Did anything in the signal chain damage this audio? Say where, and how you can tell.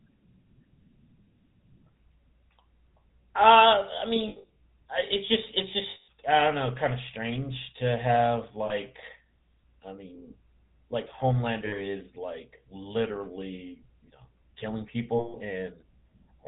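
Yes. GSM full-rate codec, throughout, at the codec stage: speech is buzzy and gravelly with nothing above 4 kHz, which fits 13 kbps pulse-excited vocal-tract coding.

Lost GSM frames at the network stage, at 4.28–4.61 s, 5.90–6.08 s after "just it's", 8.66–8.72 s, 11.66–11.79 s and 15.18–15.36 s: the last good frame repeats, leaving a rough metallic ring.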